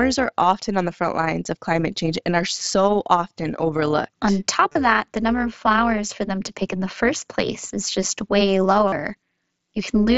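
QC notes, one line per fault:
Throughout: overlap-add ripple. The level swells and dips by about 6 dB around 200 times a second, giving the sound a rough, buzzy tremolo. The frames were rejoined with an overlap whose window gains do not add up to a constant, so the loudness pulses once per frame. Packet loss breaks the sound only at moments. This flutter is steady and evenly spaced from start to end, and it stays fixed at the frame rate whatever the sound does.
4.69 to 4.75 s and 8.88 to 8.92 s: concealed Bluetooth headset packet loss. About 45 ms of signal is missing at each point, which fits roughly six lost packets. In the first event the losses are spread over about 60 ms, and the longest gap is 30 ms. The receiver filled each gap by repeating a matching piece of the waveform it had just received. This produces a short buzzy hold at full level, then a slight warble as the real audio comes back. 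The hold is brief and happens in only two places, so it differs from the ripple that runs through the whole clip. The mSBC headset link carries the audio with its usual light graininess.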